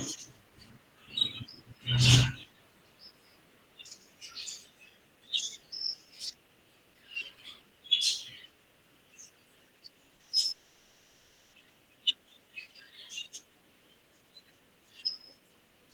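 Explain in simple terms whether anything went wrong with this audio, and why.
Something went wrong twice, close together, near the 10-second mark.

Repeated packet loss (robotic sound): from 10.07 to 10.45 s, small chunks of the audio failed to arrive over the network, about five times in quick succession, each hole up to 40 ms long. The receiver patched each one by stretching the sound just before it, so about a third of this short stretch is filler. The speech turns choppy, with bits missing.

Long network dropout: from 10.51 to 11.55 s, just over a second of speech is gone. The cause is likely a connection interruption where nothing came through at all. The receiver filled the entire gap with a continuation of the last sound, so there is no clean silence, just an artificial buzz or hiss that fades. The speech resumes at 11.55 s, and the missing second is never recovered.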